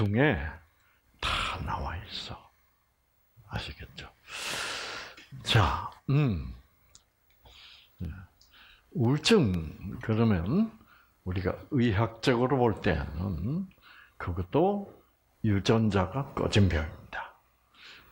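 Periodic USB or driver dropouts from 0.06 to 10.04 s: every 0.5 s a blocked audio path drops a sub-millisecond sliver to silence, heard as regular, evenly spaced ticks.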